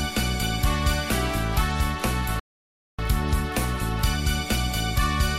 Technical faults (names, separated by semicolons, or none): playback stall